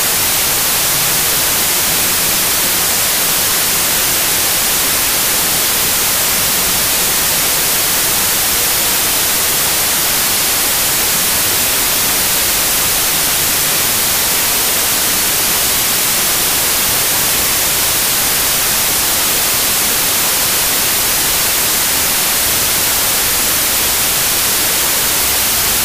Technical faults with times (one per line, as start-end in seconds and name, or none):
0.00-25.85 wrong sample width